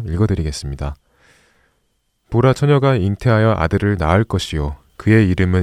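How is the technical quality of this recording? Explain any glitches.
No glitches are audible anywhere in the recording, so there is nothing to report.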